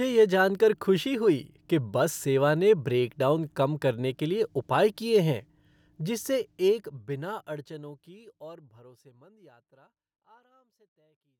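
No technical faults can be heard in the speech. From about the halfway point the level fades out smoothly to the end, as an editor would shape it, with no click or hard edge.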